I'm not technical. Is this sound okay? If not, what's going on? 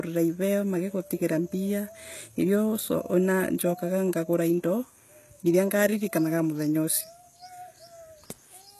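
No, the speech sounds lispy and metallic on the s sounds the whole way through, with treble that's rebuilt rather than real, likely from heavy HE-AAC compression.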